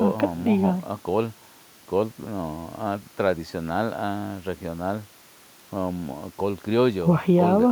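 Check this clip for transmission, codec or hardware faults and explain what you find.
I checked this clip and found no faults.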